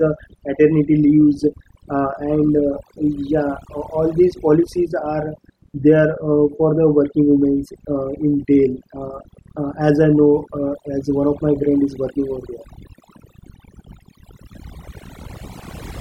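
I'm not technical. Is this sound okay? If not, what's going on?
No. This speech has overdone noise removal throughout: a noise reduction tool was pushed too hard, switching off frequency bands it took for noise, along with quiet parts of the voice. The background drops and breaks up into twinkling specks.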